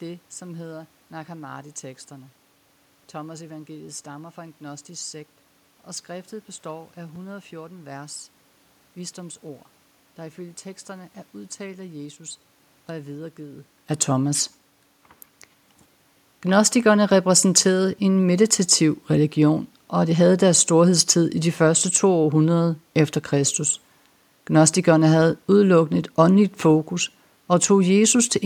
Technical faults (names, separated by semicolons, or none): repeated buffer